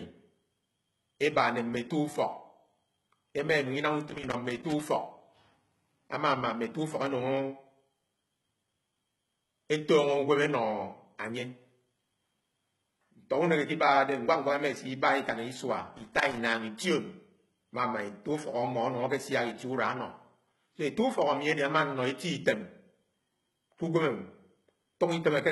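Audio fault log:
Throughout: HE-AAC compression. The treble has a gritty, metallic sheen, and the s sounds come out lispy and smeared. The likely cause is spectral band replication: the upper band is rebuilt by copying lower bands upward under a coarse envelope, so its harmonics do not line up with the real ones below the crossover. The heavy damage fits a low bitrate of about 16 kbps. On a spectrogram, content stops sharply at 11.8 kHz, with blocky, repeated-looking texture in the top band.
4.09–4.81 s and 15.98–16.38 s: loose connector crackle. Two irregular bursts of scratchy crackle, the first about 0.72 s long and the second about 0.4 s. A worn or dirty contact was making and breaking as it moved, chopping the signal on and off. On the waveform these show as ragged dropouts and sharp spikes. On a spectrogram they appear as scattered broadband vertical streaks up to the 11.8 kHz cutoff.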